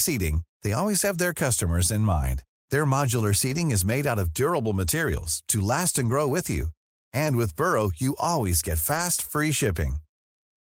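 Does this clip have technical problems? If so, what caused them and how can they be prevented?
Yes. The speech has five short stretches of lost packets rebuilt from error correction, at 3.47–3.57, 5.19–5.25, 6.01–6.11, 7.25–7.31 and 8.89–9.03 s, each 40 to 80 ms long, which fits runs of two to four lost 20 ms packets. There are no gaps because each missing frame was filled from the low-bitrate redundant copy carried in the next packet, but those patched frames sound rougher and noisier. Reducing packet loss on the network path prevents this.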